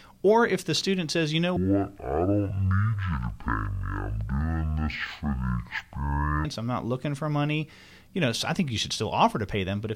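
Speech, with a stereo read as mono fault from 1.57 to 6.45 s, after "student says you know" and before "I'm not looking for". Left and right samples are read in sequence as one channel, so the audio plays at half speed and an octave low. A faint mirrored copy in the upper half of the spectrum distinguishes it from a plain slowdown.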